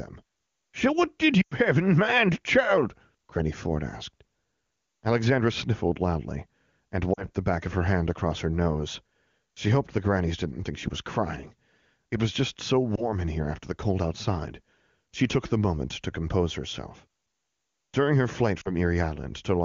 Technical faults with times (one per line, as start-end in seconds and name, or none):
1.41-1.54 lost AMR speech frames
7.13-7.27 lost AMR speech frames
12.96-13.12 lost AMR speech frames
18.61-18.71 lost AMR speech frames